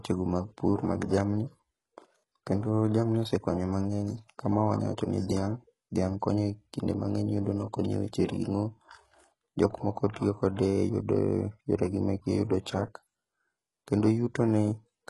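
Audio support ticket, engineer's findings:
Codec stage, throughout: likely HE-AAC compression at a very low rate, which fits roughly 12 kbps. Upper band resynthesised by spectral band replication, not coded. Symptom: heavy damage, treble bright but artificial, sibilants gritty, metallic, lisping; harmonics misaligned across crossover. Hard ceiling, no content above 11.5 kHz.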